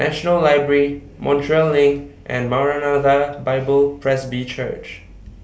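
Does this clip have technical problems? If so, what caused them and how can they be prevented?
No, the speech signal shows no technical faults at any point in the recording.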